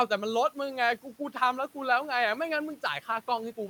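Between 1.03 and 1.36 s there's speech cut by the noise suppressor: it mistook quiet speech for noise and pulled it down by up to about 11 dB, leaving roughly a tenth of a second swallowed. The room noise sits about 27 dB under the speech.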